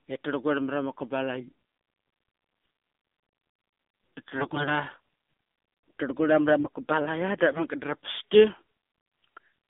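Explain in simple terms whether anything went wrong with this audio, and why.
The whole recording went through the AMR narrowband mobile codec, an old phone-call format that keeps only about 200 Hz to 3.6 kHz, so speech sounds thin, buzzy and synthetic. AMR bit errors from a weak signal garbled the data at 4.38 to 4.71 s and 6.61 to 6.76 s, making the voice briefly scratchy, hoarse and gargly.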